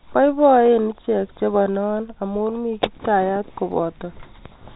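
No technical faults can be heard in this speech recording.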